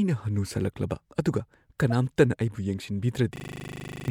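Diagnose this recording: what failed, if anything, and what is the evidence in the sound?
At the codec stage, a couple of compressed frames arrived with flipped bits and were decoded anyway. Between 1.90 and 1.92 s the misread gains and codes put energy at the wrong frequencies, so the speech gives way to a short chirp-like burst of noise. This is a corrupt frame decoded.

A system hang loop occurred at the driver or buffer stage. The host froze while the output hardware kept replaying its ring buffer. From 3.36 to 4.08 s one 40 ms slice repeats 18 times at 25 Hz, giving a machine-gun stutter in place of about 0.7 s of speech.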